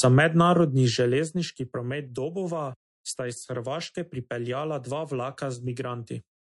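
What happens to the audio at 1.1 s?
At 1.1 s the level is falling as zipper noise: from 0.46 to 1.68 s the gain drops by roughly 10 dB in unsmoothed steps, around 50 a second, each leaving a tiny click that adds up to a ticking buzz, unlike a clean, silent fade. Underneath, the speech carries MP3 compression: nothing sounds above 11.3 kHz, and weak components flicker into a watery, swirling texture, likely from a low bitrate near 48 kbps, which sets it apart from a simple treble roll-off.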